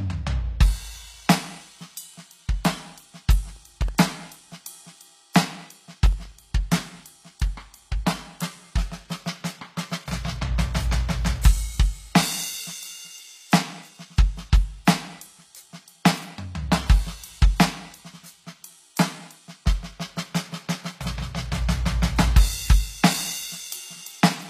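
Music with HE-AAC compression damage throughout: treble is likely rebuilt by band replication, sounding gritty and metallic, nothing above 14.9 kHz, which fits a low bitrate near 24 kbps.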